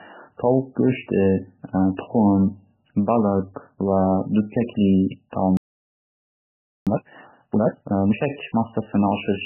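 Throughout the speech, the sound is dull and watery, with heavy swirling and smeared consonants. This is likely MP3 compression at a very low bitrate, around 8 kbps. The starved encoder cut the treble and dropped weak frequency lines.

At 5.57 s the speech stops dead in mid-flow. Silence lasts about 1.3 s, until 6.87 s. This is likely a playback stall. The player ran short of data or was blocked, so the output went quiet until it recovered.

From 6.87 s to 8.15 s, the speech rushes at twice normal speed. Pitch stays normal. This is time-compressed catch-up. The player works off its backlog by cutting out small pieces and cross-fading the rest together.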